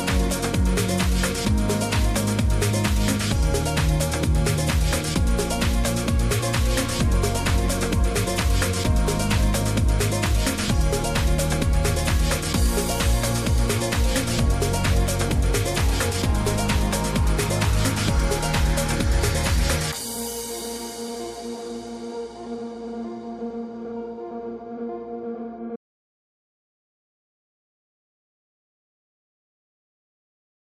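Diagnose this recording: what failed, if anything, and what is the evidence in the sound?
Audio dropout to silence from 25.76 s to the end, likely an input-stage link loss: the sound cuts abruptly, the waveform goes flat and silent, and the spectrogram is blank, with no room tone.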